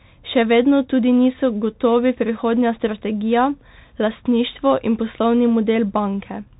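Speech that carries the Bluetooth CVSD headset codec throughout: nothing passes above 3.8 kHz, s sounds turn scratchy, and a granular hiss sits under the speech, fitting a 64 kbps one-bit stream. Plain telephone filtering would narrow the band without that grainy, slope-overload roughness.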